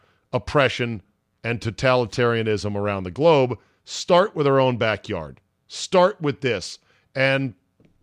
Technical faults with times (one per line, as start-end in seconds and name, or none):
none